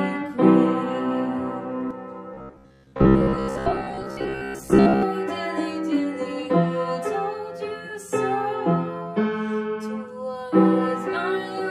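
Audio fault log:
1.91 s to end, channel delay (comb filtering): one channel runs about 10 ms behind the other. Summed to mono, shared content cancels at evenly spaced frequencies from around 50 Hz upward, carving fixed notches that leave the sound hollow and phasey.
2.34 to 5.03 s, robotic sound from repeated short buffers: a rigid metallic buzz at 66.7 Hz appears, likely from audio arriving too seldom and a 15 ms chunk being replayed to fill gaps. Most of the real material is skipped.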